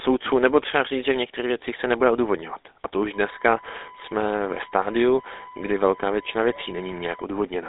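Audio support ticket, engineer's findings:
GSM full-rate codec, throughout. Speech buzzy and gravelly, band held to about 300 Hz to 3.7 kHz with nothing above 3.8 kHz. Likely cause: a 13 kbps GSM full-rate leg. The rough, pulse-driven texture comes from a coarse regular-pulse excitation, not from the watery swirl of a low-bitrate transform codec.

USB whine, 3.13 to 7.24 s. Steady tone at 1 kHz, roughly 25 dB below the speech. Probable component: USB interface or hub, with 1 ms frame current leaking through power or ground. Mains hum would sit at 50 or 60 Hz and its harmonics, not a clean 1 kHz.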